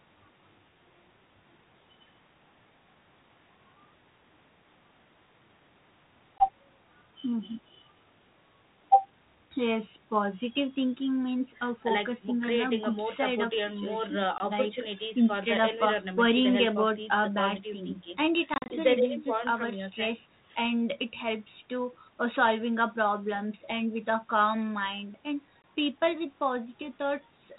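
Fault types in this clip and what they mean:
Packet loss on an ADPCM call: hard-edged dropouts to silence, three of about 20 ms near 6.38, 14.38 and 25.62 s, plus a broken stretch from 18.54 to 18.73 s with roughly 100 ms missing in gaps up to 40 ms. Afterwards the sound resumes with some distortion, because the decoder's adaptive predictor and step size drifted from the sender's during the gaps and take tens of milliseconds to resync.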